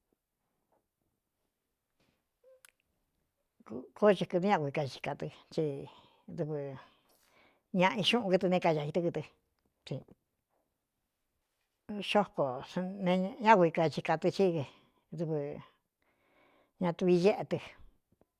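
Speech recording with no technical faults to report.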